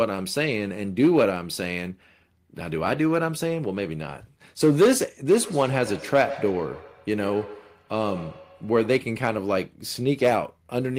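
Feedback echo between two devices, 5.39 to 9.15 s: another device's loudspeaker feeds this microphone, returning the speech roughly every 150 ms, about 15 dB below it.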